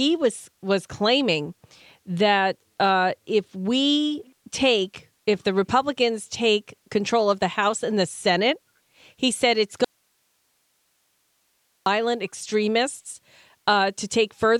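Audio dropout to a faint residue at 9.85–11.86 s, after "he said it's": speech abruptly gives way to faint hiss, likely a lost feed with the path still live.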